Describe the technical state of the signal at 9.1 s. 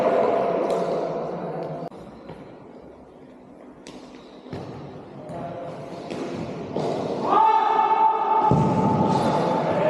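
At 9.1 s a Bluetooth SBC bit pool drop (8.21–9.36 s) starves the upper sub-bands, dulling the treble and adding gritty noise; the spectrogram's top band thins out.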